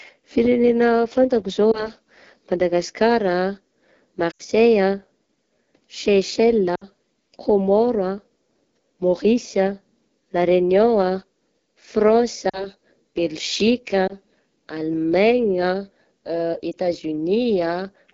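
AMR wideband (HD Voice) codec damage runs through the whole of this speech recording. The voice has a plainly rough, raspy texture. The vocal tract model and pulse excitation are getting too few bits to describe the speech below 6.4 kHz, and the band up to 7 kHz is only noise shaped to fit. That harshness points to one of the two lowest AMR-WB rates, which fits 8.85 kbit/s. Lost AMR speech frames occur at 1.72–1.89, 4.32–4.42, 6.76–6.87, 12.50–12.68, 14.08–14.14 and 16.72–16.75 s. Each time the decoder, missing data that failed its check, repeats the last good pitch and spectral settings at falling gain, so the sound smears and dips before recovering weak or rough. The stretches at 1.72, 14.08 and 16.72 s fit a single 20 ms frame and give a short warble. The longer gaps of about 80 ms at 4.32 s, 60 ms at 6.76 s and 40 ms at 12.50 s fade more noticeably.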